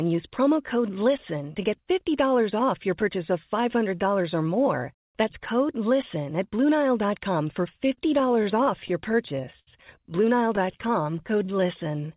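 From 7.95 to 9.68 s the speech drags and catches in a stutter: fourteen brief holds, together 219 ms, the longest 74 ms, covering about 13% of that stretch. A second, shorter patch of repeated stalls (stutter) follows at 10.56 to 10.89 s, with four holds totalling 40 ms, none longer than 11 ms. In both, packets reached the receiver late or too slowly, its jitter buffer kept running dry, and it extended the last sound to cover each wait, so nothing is actually lost.

From 11.01 s to 12.08 s the speech turns unhurried and drawn out without any change in pitch, playing at 89% speed and gaining 119 ms. This is a jitter buffer slow-down: to rebuild its reserve, the receiver repeated single pitch periods or small pieces of pauses many times in a row, stretching the sound rather than halting it. Throughout, the band stops at 4 kHz, which fits the narrowband G.711 mu-law call path the audio travelled.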